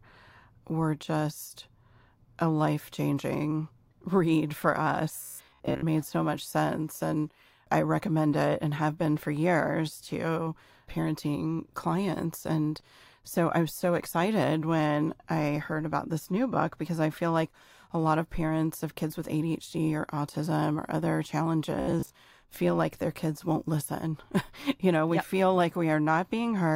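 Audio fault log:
5.23–5.84 s and 21.80–22.15 s: robotic sound from repeated short buffers. A rigid metallic buzz near 67 Hz follows the voice only roughly, likely from one 15 ms chunk looping.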